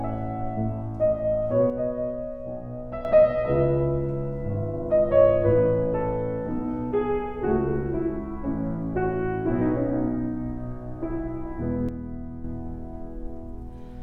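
From 1.70 to 3.05 s the level falls abruptly by about 6 dB, then snaps back, and the same step recurs from 11.89 to 12.44 s. This is likely one channel drops out: with one stereo side lost, the mono sum keeps only half of the shared content, and anything unique to that side vanishes. The waveform shows a sudden, flat-edged narrowing of the envelope; a spectrogram shows the whole band dimming uniformly, with sharp vertical boundaries.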